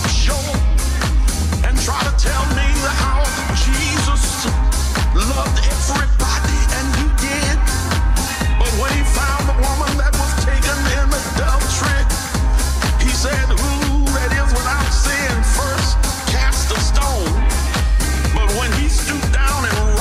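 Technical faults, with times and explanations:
8.28 to 8.30 s, corrupt frame decoded: a brief chirp-like burst of misplaced energy, peaking fairly loud at about -10 dBFS. A couple of damaged compressed frames were played anyway. Their misread codes and gains put energy at wrong frequencies for that instant.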